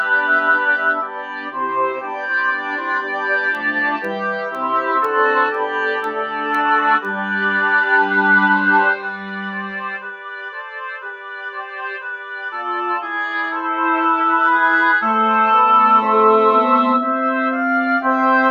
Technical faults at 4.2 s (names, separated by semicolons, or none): noise suppressor applied to music or sounds; periodic USB or driver dropouts